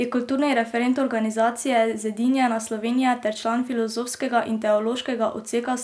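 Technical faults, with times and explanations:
Nothing technical stands out here; this bit of speech comes through without any faults worth pointing to.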